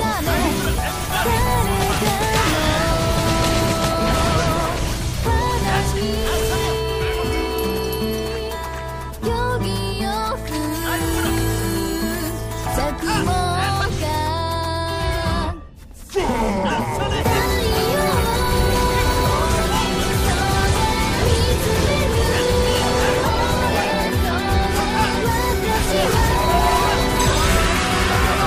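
No technical fault can be heard anywhere in this audio. There is nothing here that needs a timestamp or an explanation.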